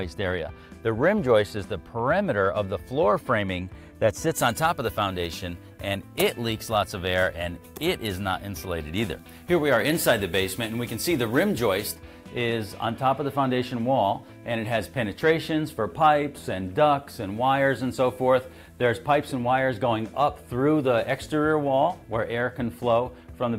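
From 4.34 s to 11.95 s the audio has pre-emphasis left on. The treble lift applied for transmission was never undone by the matching de-emphasis. High frequencies stand about 14 dB above 1 kHz at 10 kHz. The rise is steady and shelving. Its shape fits the 75 microsecond curve used in FM broadcasting. The result sounds thin, bright and hissy. Sibilance and top-end detail jump forward. The tonal balance returns to normal after 11.95 s.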